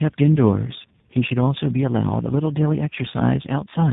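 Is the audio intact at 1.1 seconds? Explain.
No. Throughout the clip, including 1.1 seconds, there is tandem speech coding: the speech passed through three speech codecs in a row (GSM full rate, CVSD, then G.729A), each re-coding the last one's errors. It sounds rough, muffled and warbly, with nothing above 3.8 kHz.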